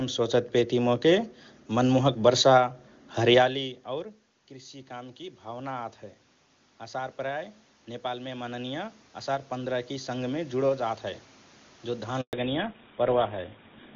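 Automatic gain rising occurs from 3.47 to 6.03 s and again from 6.79 to 11.06 s. After the speaker's level drops by about 22 dB around 3.5 s, the gain control slowly adds about 6 dB, then about 9 dB more, so the speech and room noise swell together.

A handover gap hits at 12.21 s. While the call switches networks, no speech frames arrive for 120 ms, so the speech fades out within a few tens of milliseconds and leaves a short silence.

Fallback to narrowband follows at 12.33 s and lasts to the end. The call drops from AMR-WB at 23.85 kbit/s, which had been clean, to GSM full rate at 13 kbit/s. Everything above 4 kHz disappears, and the speech turns muffled and rougher.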